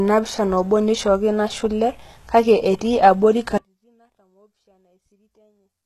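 A speech recording carries plainly audible codec damage throughout, most likely from HE-AAC compression at a low bitrate, with the character fitting something near 16 kbps. Nothing is present above 12.3 kHz, and the upper band sounds synthetic, with sibilants gritty and metallic. Spectral band replication patches the treble in from lower bands under a coarse envelope, so the harmonics above the crossover do not line up with those below. At 3.58 s the signal cuts out abruptly and does not return before the end of the clip, an audio dropout to a faint residue. For the remaining 2 s or so, only a faint trace of sound remains, around 40 dB below the normal level. The hard edge rules out a pause or fade. The likely cause is loss of the wanted feed while the downstream path stayed live and passed only faint sound.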